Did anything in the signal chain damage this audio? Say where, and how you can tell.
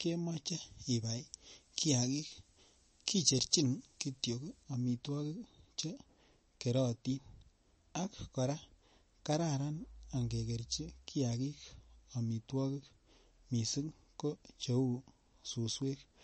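Yes. Pre-emphasis left on, 0.50 to 4.63 s, in playback or transmission: treble sits about 14 dB hot at 10 kHz, fitting an FM 75 µs curve never de-emphasised.

MP3 compression, throughout, at the codec stage: nothing above 8.3 kHz and a watery, swirling texture, likely a low-bitrate encode near 34 kbps dropping weak spectral lines.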